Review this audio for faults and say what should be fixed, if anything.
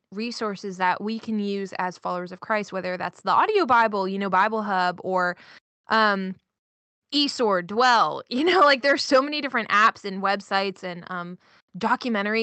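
Nothing needs fixing; no faults can be heard here.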